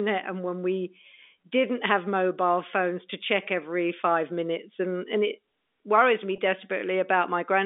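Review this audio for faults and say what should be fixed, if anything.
At 6.36 to 6.38 s, just after "and it worries me", there is a brief packet loss with pitch repetition. About 20 ms of audio went missing, which fits a single lost packet. The receiver filled the gap by repeating the last pitch period of the speech. Because the gap is so short, it sounds like a slightly held, buzzy sound rather than a dropout. The G.711 telephone band, roughly 300 Hz to 3.6 kHz, can be heard throughout. To prevent this, improve the network path or add a jitter buffer with forward error correction so single packets are recovered.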